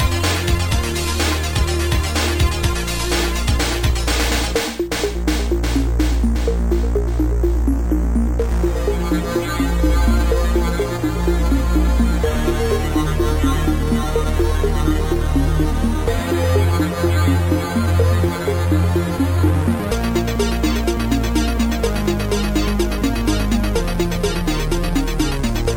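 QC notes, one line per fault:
No faults found on this pass; nothing to log.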